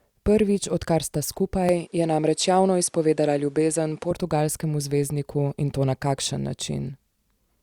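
Speech clip in which, from 1.69 s to 4.11 s, just after "odkar sta", the sound turns duller with nothing above 11.4 kHz and a faint new noise floor about 40 dB down, at unchanged level and without a gap. This points to an input switched to a poorer device, likely.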